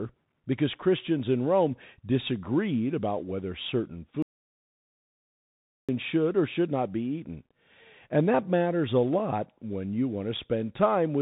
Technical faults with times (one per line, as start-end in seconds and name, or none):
0.00-11.22 Bluetooth CVSD headset codec
4.22-5.89 audio dropout to silence